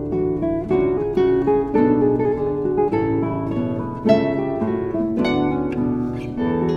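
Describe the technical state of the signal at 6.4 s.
At 6.37 to 6.42 s, compressed frames are skipped: the audio jumps ahead by roughly a tenth of a second, consistent with several 20 ms frames.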